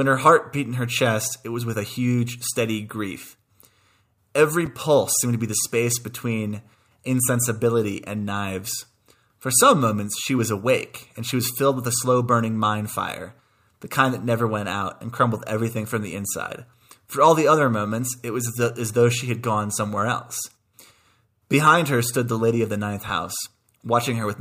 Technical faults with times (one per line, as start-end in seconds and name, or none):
4.66 chunks out of order
23.08 chunks out of order